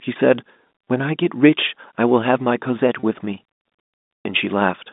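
At 0.84 s and again at 3.0 s, packet loss with pitch repetition bridges a 30 ms gap, which fits a single lost packet. The receiver loops the last pitch period, giving a brief buzzy held tone, unlike a silent dropout or click, over the narrowband G.711 telephone sound.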